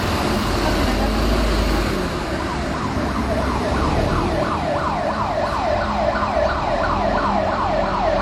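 A recording of everyday sounds carries, throughout, the layered degradation of transcoding between lossy codecs, likely an MP3 pass at around 64 kbit/s followed by HE-AAC at around 40 kbit/s. The smeared, swirly coding artefacts of both stages sit on top of each other. On a spectrogram, energy stops sharply at 18.4 kHz along the whole clip, and the texture below looks blotchy and quantised in time-frequency blocks rather than smooth.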